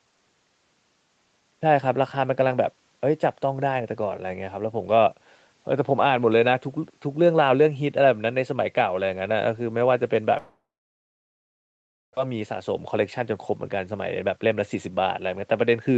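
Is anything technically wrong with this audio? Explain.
Yes. From 10.37 to 12.19 s there is a long network dropout, likely from lost packets. The receiver stretches the last sound briefly, then about 1.5 s of silence follows before the audio resumes with a piece missing. From 13.2 to 14.91 s a jitter buffer speed-up trims short pitch-period slices to shed roughly 150 ms of built-up delay, so the speech runs about 7% faster at unchanged pitch and sounds hurried.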